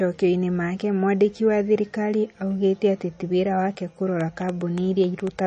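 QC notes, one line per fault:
Throughout: MP3 compression. Codec damage is plainly audible, with a watery, swirly texture and smeared attacks. Nothing is heard above 9.1 kHz. The likely cause is MP3 encoding that drops weak frequency lines and cuts the treble, which fits a bitrate around 32 kbps.
4.21 to 5.40 s: train of clicks. It starts just after "atĩ ti wĩra wake". About ten similar clicks arrive at an uneven pace, averaging 6.76 per second, and stand roughly 5 dB above the signal. The likely cause is interference, a faulty connection or a power supply injecting pulses.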